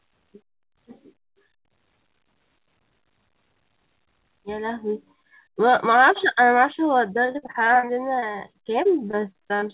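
From 7.26 s to 9.71 s, the end of the speech breaks up with repeated packet loss, giving a robotic sound. Around two dozen short holes, the longest about 40 ms, are each bridged by stretching out the preceding fragment, so roughly a fifth of that span is filler and the speech turns choppy. On a spectrogram, smeared flat stretches and abrupt breaks interrupt the harmonics, all below a sharp 4 kHz ceiling that fits a narrowband G.711 call path.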